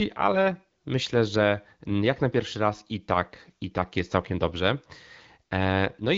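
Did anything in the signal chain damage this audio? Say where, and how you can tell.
No, nothing in this speech stood out on listening as damage from any stage of the chain.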